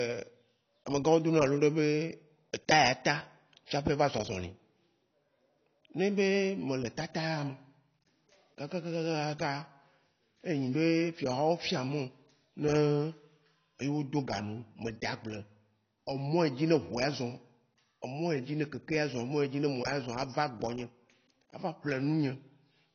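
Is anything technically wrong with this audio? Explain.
Yes. Throughout the speech, AAC compression is likely: nothing sounds above 6.6 kHz, a low-bitrate cut-off fitting roughly 24 kbps. Sibilants come out dull and smeared, and a spectrogram shows a flat ceiling at 6.6 kHz.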